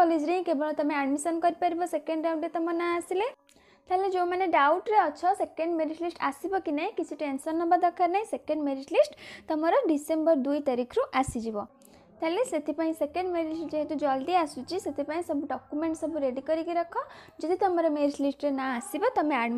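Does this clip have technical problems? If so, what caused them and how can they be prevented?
No, there are no audible technical problems here.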